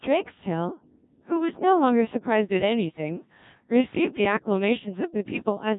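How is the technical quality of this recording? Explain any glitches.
The quality is poor. Throughout, the speech carries heavy Codec 2 vocoder damage. Only pitch, voicing and envelope survive, resynthesised from sine waves, which fits a rate near 1.3 kbit/s. It sounds robotic and buzzy.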